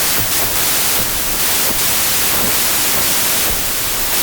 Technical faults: wrong sample width

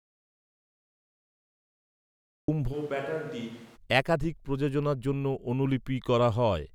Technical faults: audio dropout to silence; switch to a distant microphone

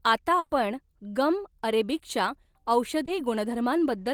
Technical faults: burst of packet loss; short concealed packet loss

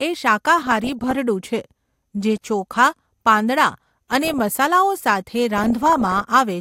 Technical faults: DAB burbling

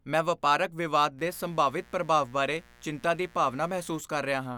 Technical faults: mains buzz

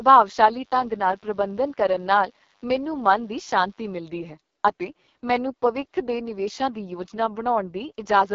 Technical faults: AMR wideband (HD Voice) codec; mains buzz

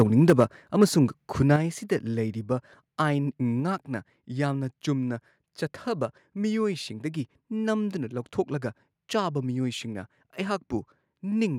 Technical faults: microphone overload; microphone volume stepped down

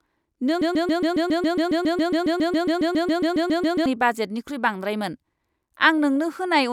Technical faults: broken-record loop

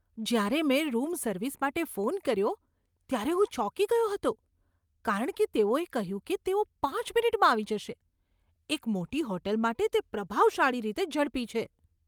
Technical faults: none

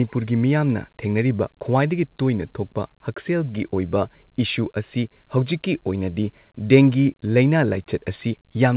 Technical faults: none

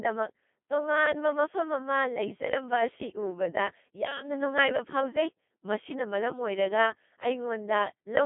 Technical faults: Codec 2 vocoder

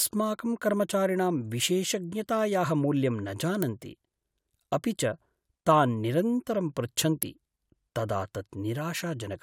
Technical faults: electrical switching spike

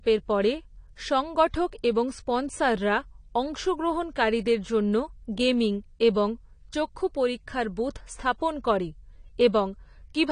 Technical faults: AAC compression

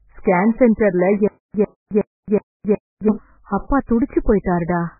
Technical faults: MP3 compression

